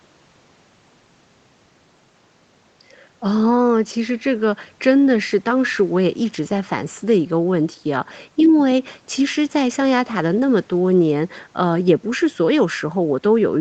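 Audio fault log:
No faults heard.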